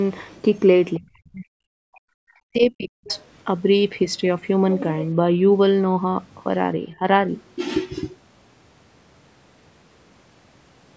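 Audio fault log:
0.98–2.3 s, 2.46–3.08 s and 6.92–7.02 s, speech suppressed in double talk: the likely cause is an echo canceller that could not tell the near talker from loudspeaker echo while both sides spoke, so it pulled the whole microphone signal down. In the first two spans the speech sinks by as much as about 40 dB for roughly a second and then most of a second. At 6.92–7.02 s the dip is shallow, about 5 dB, and very brief.
3.08–3.24 s, other side's voice leaking through: the likely cause is echo cancellation leaving behind part of the far end's playback that the microphone picked up from the loudspeaker. Just as the second suppressed span ends, a faint scrap of a second voice, around 25 dB below the main speech, slips through for a fraction of a second.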